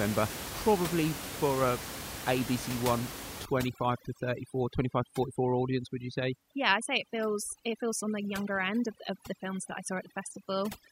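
From about 3.45 s to the end, there's overdone noise removal: the denoiser clamps down hard on any band near its noise estimate, so the room noise, sitting about 11 dB under the speech, collapses into twinkling specks and quieter parts of the voice get pulled down along with it.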